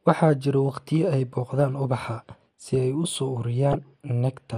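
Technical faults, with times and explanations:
throughout: MP2 compression. The speech sounds dull and granular, likely from MP2 at a rate near 80 kbps; a spectrogram shows upper sub-bands blinking off in blocks.
1.6 s and 3.73–3.75 s: DAB burbling. After "jira waqtiyo ay" and after "si ay u soo", bit errors corrupt a few frames, causing short blips of noise in single sub-bands; spectrograms show isolated band-shaped bursts.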